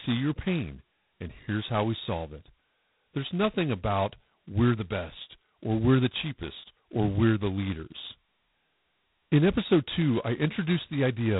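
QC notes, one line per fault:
Throughout: G.726 ADPCM at heavy damage, with a harsh, rasping hiss riding on the speech and rising and falling with its level. Coarse 2-bit difference coding fits 16 kbit/s; nothing passes above 3.8 kHz, leaving a narrow telephone band.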